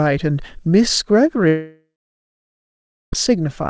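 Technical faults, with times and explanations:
1.48–3.13 s, long network dropout: about 1.65 s of audio goes missing. The last sound is stretched into a fading buzz or hiss, then about 1.26 s of silence follows before the sound resumes further on, likely because packets never arrived and the receiver concealed the gap.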